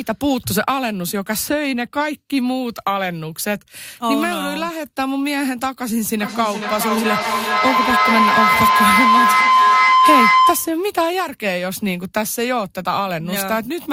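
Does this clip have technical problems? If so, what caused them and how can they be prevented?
Yes. Feedback howl runs from 6.18 to 10.88 s. A tone near 1 kHz builds from repeats roughly every 0.4 s, peaking about 6 dB above speech. Two devices sharing one room re-amplified each other's sound. Mute or remove one device to prevent it.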